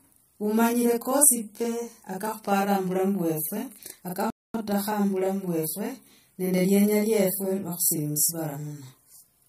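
Throughout the speech, every sound is heard twice. This is channel delay (doubling). One channel arrives 40 ms behind the other. The two are then summed to mono. At that gap the copies do not blend. The late copy sits at the same level as the first. Each syllable gets a short, equal slap behind it. Consonants sound doubled. The voice seems to come from a hard, near reflection.

At 4.30 s the audio stops dead in mid-flow. This is a playback stall. Silence lasts about 240 ms, until 4.54 s. The likely cause is that the player ran out of data or its thread was blocked. It then recovers and output resumes. The gap lands inside the flow of speech, not at a natural pause.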